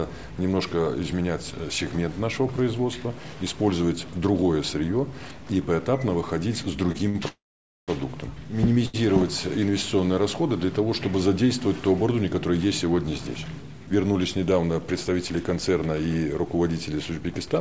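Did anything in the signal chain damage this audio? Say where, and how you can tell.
Yes, and it's all in the network and jitter-buffer stage. Short stalls from late packets show up at 6.92–6.96 s, 7.09–7.16 s and 8.86–8.96 s. Each time the buffer ran dry and the receiver stretched the last bit of sound for 24, 49 and 79 ms, then carried on from the same spot with nothing lost.

At 7.28 s the sound freezes until 7.90 s. The held sound fades, and about half a second of that is silence, then playback resumes right where it stopped. That's a call audio freeze, likely from packets held up in the network, which pushed about 600 ms of delay into the stream.

Between 13.18 and 13.71 s the jitter buffer speeds up. The audio runs at about 113% speed while the pitch stays the same. The receiver trimmed around 70 ms in tiny pitch-period slices to work off the backlog, so that stretch sounds hurried. 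The band limit at 8 kHz fits a 64 kbps G.722 call path.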